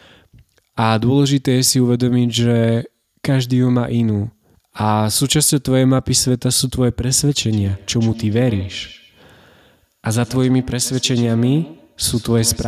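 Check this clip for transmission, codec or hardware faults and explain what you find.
One fault shows up: feedback echo between two devices, from 7.53 s to the end of the clip. Two devices on the call share a room, so one's loudspeaker feeds the other's microphone, which each echo canceller ignores. Each word returns about every 150 ms, peaking about 17 dB below the speech.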